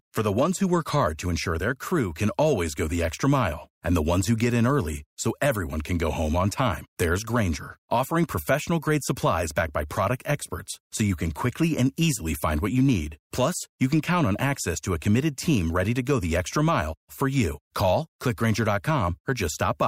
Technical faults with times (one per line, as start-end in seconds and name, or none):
none